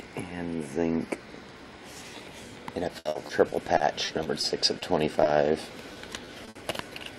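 From 2.99 to 4.83 s there is repeated packet loss, heard as choppy, robotic sound: a string of gaps up to 60 ms long, about 14% of that stretch, each patched by extending the preceding sound. A spectrogram shows frozen, smeared harmonic bands, and the waveform shows repeated, copied-looking segments.

At 5.23 s comes a short concealed packet loss. About 20 ms was synthesized in place of the missing audio, giving a brief smear or wobble. It appears as a thin, blurred vertical slice.

From 5.93 to 6.57 s the repeated packet loss returns. Gaps up to 60 ms are concealed across about 19% of that span, producing the same choppy, robotic texture and the same repetitive patches in the spectrogram.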